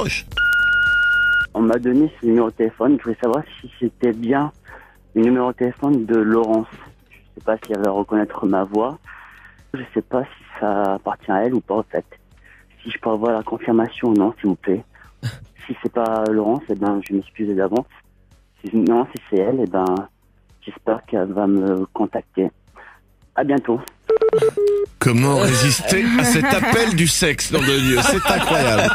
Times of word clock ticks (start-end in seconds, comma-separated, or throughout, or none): 0.13-28.89